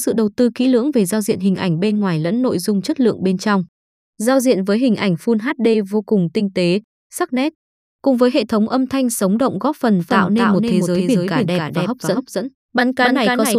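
Speech with a doubled audio track from 10.00 s to the end, just after "thanh sống động góp". A full-band second copy trails by roughly 300 ms, about 5 dB quieter, with no decay. It enters abruptly. The likely cause is a slower second capture path or an out-of-step edit.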